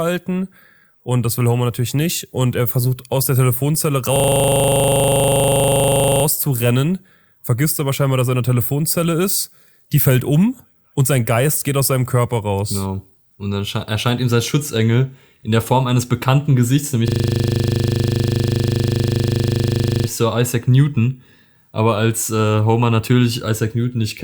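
From 4.16 to 6.24 s and again from 17.08 to 20.08 s, a system hang loop repeats one 40 ms fragment at 25 Hz, showing as identical repeating waveform cycles and evenly spaced vertical striations.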